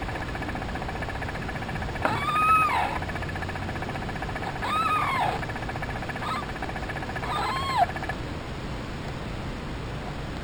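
Imaging from linear upsampling runs throughout the audio. The rate was raised by straight-line interpolation, which fits a 12 kHz source taken to 48 kHz. This dulls the top of the band and leaves a faint mirrored copy between 6 and 12 kHz, roughly 25 dB down, heard as a light metallic shimmer.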